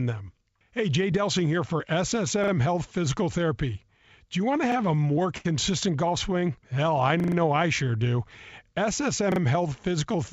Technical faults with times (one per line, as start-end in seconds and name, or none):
2.44-2.52 repeated buffer
4.58-5.46 repeated stalls (stutter)
4.72-4.76 repeated buffer
7.20-7.36 repeated buffer
9.32-9.40 repeated buffer